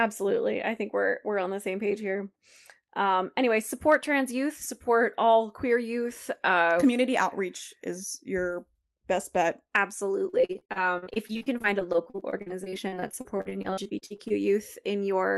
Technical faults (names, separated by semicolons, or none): repeated packet loss (robotic sound)